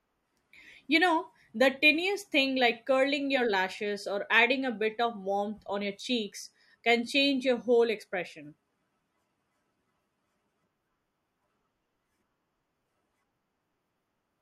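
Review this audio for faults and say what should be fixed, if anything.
No faults found in the speech recording; nothing to fix.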